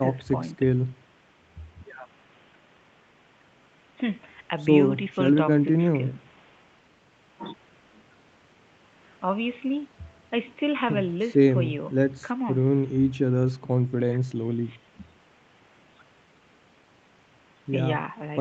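Nothing goes wrong in this speech clip, which sounds like ordinary call audio with the top end stopping around 8 kHz and faint room noise sitting about 28 dB under the talking.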